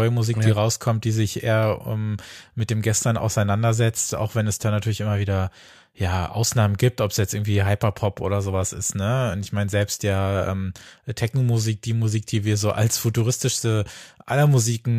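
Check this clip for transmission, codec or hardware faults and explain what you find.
One fault stands out: a short run of CD scratch ticks near the end of the speech. From 12.70 to 13.38 s, just after "die wir so", five sharp ticks land at a steady pace of about seven per second. Each is a tiny click or gap, the longest well under a millisecond. The regular spacing points to a disc blemish passing the laser once per revolution. Each pass corrupted more data than error correction could rebuild, so the player patched or silenced those few samples.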